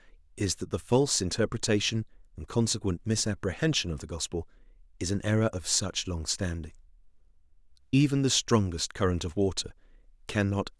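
Listening closely to the speech recording, nothing stood out as a technical fault at any point.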